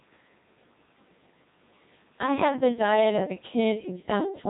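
From start to finish the speech has been through the Codec 2 vocoder, and it's a heavy hit. The waveform isn't really there anymore: it's been rebuilt from sine waves using only pitch, voicing, energy and a rough spectral shape, which fits the 2.4 kbit/s mode. The result sounds robotic and buzzy, with nothing above about 3.8 kHz, so the top end is gone and everything comes across dull.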